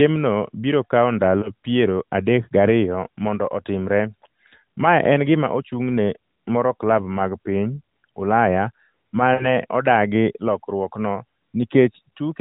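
At 1.40 to 1.51 s the speech briefly dips and warbles, then recovers rough for a moment, which fits a single lost 20 ms frame. At 9.34 to 9.48 s the sound smears into a drawn-out, fading hold before returning weak, consistent with about 60 ms of consecutive loss. Both are lost AMR speech frames: corrupted frames failed their checks, so the narrowband decoder, running lightly compressed at 12.2 kbps, repeated its last good pitch and vocal-tract settings while lowering the gain.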